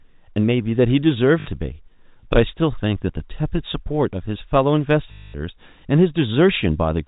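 At 1.4 s, and again from 5.12 to 5.34 s, the speech hits packet loss with the last packet repeated. The receiver kept replaying the last packet to fill 60 ms and then 220 ms of missing audio, which fits 20 ms packets. The longer run buzzes at about 50 Hz, a robotic stutter. A plain dropout would fall silent, and smoother concealment would fade out instead. The telephone-band sound is from the G.711 coding.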